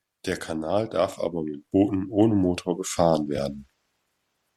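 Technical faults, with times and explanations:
3.37 s, lost LE Audio frames: a brief gap of about 15 ms, which points to two consecutive 7.5 ms frames going missing. The LC3 decoder filled it by repeating the last spectrum with randomised signs, so the speech turns momentarily into a noisy smear.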